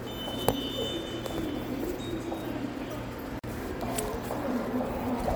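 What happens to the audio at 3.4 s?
At 3.39 s the sound drops out for about 43 ms, then resumes at 3.44 s exactly where it left off, with smeared edges on either side of the hole, so the truly silent part is shorter than that. This is a gap at a join of encoded pieces: the audio was encoded in separate segments and spliced without trimming, so the encoder's start-up delay and the padding on the previous segment's final frame both remain as dead air in the middle of continuous sound.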